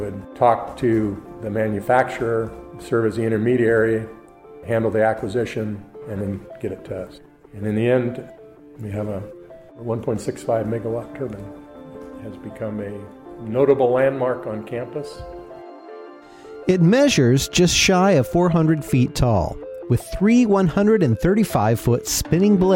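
Nothing in this audio stands out as a technical problem; there's nothing here to flag.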